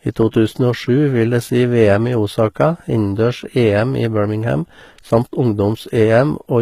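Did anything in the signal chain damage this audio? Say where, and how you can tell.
Yes. Throughout the clip the treble of the speech sounds bright but synthetic: sibilants come out gritty and lisping, the high harmonics don't follow the lower ones, and nothing is present above 14.9 kHz. This points to the codec stage, likely HE-AAC compression, whose spectral band replication rebuilds the top band by copying lower bands upward under a coarse envelope. Damage this plainly audible fits a low bitrate, around 20 kbps.

At 0.31 s there is pre-echo, also from the codec stage: a brief hiss of about 18 ms runs just ahead of a sharp onset, and the attack itself sounds softened and smeared. The transform coder spreads its quantisation noise over the whole block, so noise sized for the loud attack also fills the quiet stretch before it when the attack falls late in that block.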